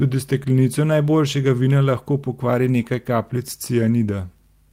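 A lost packet rebuilt from error correction occurs from 2.81 to 2.83 s, right after "najboljšega vina lahko pokvari". The 20 ms gap, which fits a single lost packet, was filled from a low-bitrate copy carried in the next packet, so there is no dropout, just a brief rougher, noisier patch.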